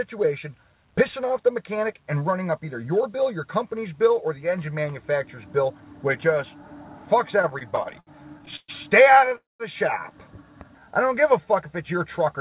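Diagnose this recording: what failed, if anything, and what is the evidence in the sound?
Network, then jitter buffer. From 7.42 to 8.70 s the sound hiccups through a run of repeated stalls (stutter): twelve short hangs where the last bit of sound gets stretched and held, the longest about 123 ms. That's about 324 ms of filler, roughly a quarter of the stretch. Nothing actually drops out, though. Packets just kept turning up late, the buffer kept draining, and the receiver padded each hole until the stream caught up.

At 9.36 s the sound hangs again, this time for about a quarter second until 9.62 s. There's a brief continuation of the last sound, then mostly silence for about 190 ms, and the audio picks up exactly where it left off. That's a call audio freeze, likely caused by packets getting held up in the network long enough to empty the buffer. The whole timeline slips about 240 ms later as a result.

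Then from 10.68 to 11.47 s the sound drags at about 90% speed with the pitch unchanged, so things sound drawn out. That's a jitter buffer slow-down. The buffer was rebuilding its reserve by repeating single pitch periods or bits of pauses over and over, which added about 88 ms. Throughout, there's nothing above 4 kHz, which fits a narrowband G.711-style call path.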